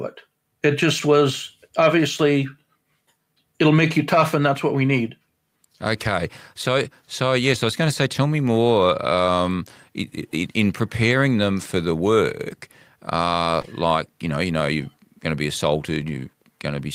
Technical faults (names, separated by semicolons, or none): lost packet rebuilt from error correction; short concealed packet loss